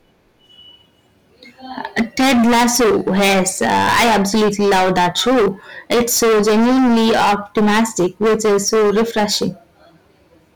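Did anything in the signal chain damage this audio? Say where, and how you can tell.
Yes: a harsh fuzz sits on every loud sound throughout. That is hard clipping. About 22 dB of overdrive at a converter or gain stage flattens roughly a third of the waveform.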